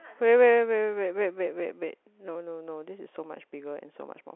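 No technical faults are audible.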